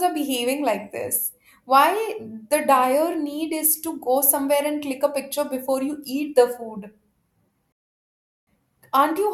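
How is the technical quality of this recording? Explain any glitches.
One glitch stands out: a rebuffering stall in the speech from 7.72 to 8.47 s. The player ran short of downloaded audio and paused until more arrived, inserting 749 ms of silence before the speech resumes exactly where it stopped, with nothing skipped. A waveform shows a flat, near-silent line there, and a spectrogram shows a clean vertical blank band.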